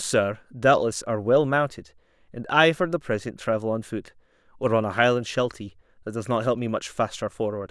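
No technical faults can be heard anywhere here.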